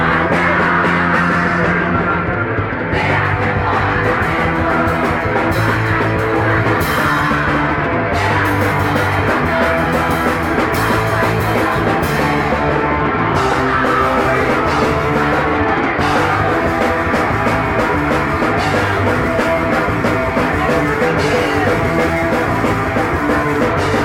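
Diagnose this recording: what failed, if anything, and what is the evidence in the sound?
Nothing failed: no stage in the chain, from the analogue wiring through the converter, buffering, processing and storage to playback, leaves any audible trace of a fault.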